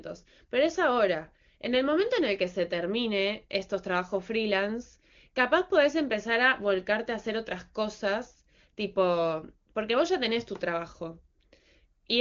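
Nothing stood out on listening to the speech.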